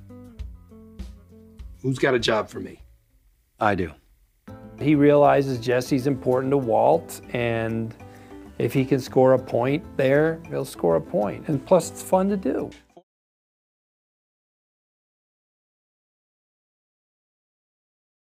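Nothing here calls for a fix; the only thing of note is a gentle fade out that starts at about 12.5 s and is done by 13.04 s, just as an editor would shape it.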